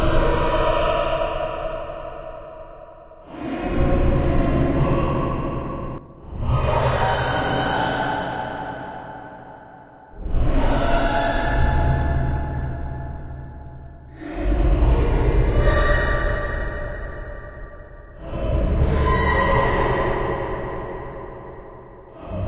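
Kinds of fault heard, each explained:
Skip ahead: at 5.98 to 6.00 s about a second of the sound is dropped with no gap left, and playback jumps forward; a waveform shows an abrupt joint with no silence, a spectrogram a sudden vertical seam where patterns change, below the 4 kHz ceiling.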